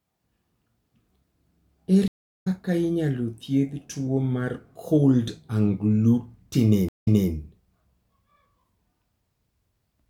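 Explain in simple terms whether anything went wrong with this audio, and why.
Something went wrong twice: a stream reconnect. The connection dropped, the player went quiet, reconnected and restarted decoding mid-stream. At 2.08–2.48 s there is about 0.37 s of silence, and the speech picks up at "inyalo thiedh tuwo mar", roughly 0.2 s further on, so a short stretch is skipped. At 6.89–7.31 s the gap is 0.17 s, and playback resumes 0.26 s earlier than where it stopped, so a brief piece is heard twice.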